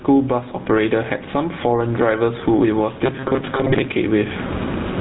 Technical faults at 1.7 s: gain pumping; GSM full-rate codec

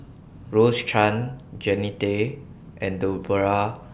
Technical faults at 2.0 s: none

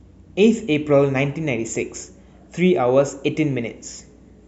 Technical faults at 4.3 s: none

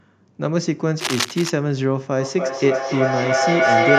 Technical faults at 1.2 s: cable scratch noise

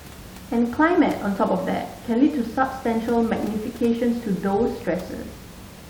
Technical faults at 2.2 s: none

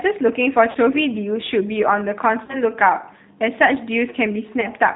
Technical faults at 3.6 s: G.729 codec

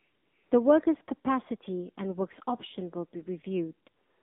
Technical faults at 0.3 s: AMR narrowband mobile codec; AMR comfort noise

